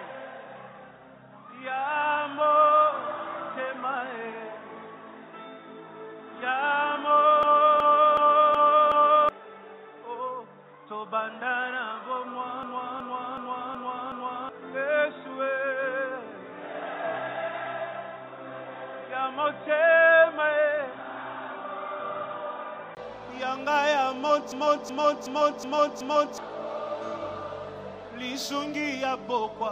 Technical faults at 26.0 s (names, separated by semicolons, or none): system hang loop